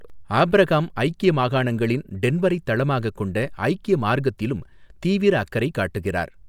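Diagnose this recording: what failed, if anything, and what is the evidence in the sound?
Clock slip clicks run from 0.10 s to 6.47 s, a rapid rattle of roughly one tick every 30 ms. The likely cause is a converter clock mismatch of around 700 ppm, dropping or repeating one sample at each slip. A spectrogram shows evenly spaced thin vertical lines through the speech.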